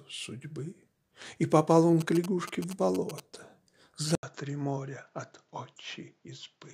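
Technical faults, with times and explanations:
2.01 to 3.2 s, GSM signalling bursts: a galloping dit-dit-dit of brief buzzes, roughly 10 dB below the main sound, repeating at about 217 Hz. A nearby 2G phone exchanging signalling bursts induces radio energy that the audio circuit rectifies into clicks. On a spectrogram this appears as a comb of harmonics stacked on 217 Hz, switching on and off in clusters.
4.15 to 6.74 s, input switched to a poorer device: after a gap of 80 ms the sound turns duller and boxier, drops by roughly 5 dB, and carries a new noise floor roughly 45 dB beneath it. Nothing remains above 7.6 kHz. The likely cause is the system changing to another microphone or a headset call profile. A spectrogram shows a hard upper edge at 7.6 kHz and a brief blank column at the switch.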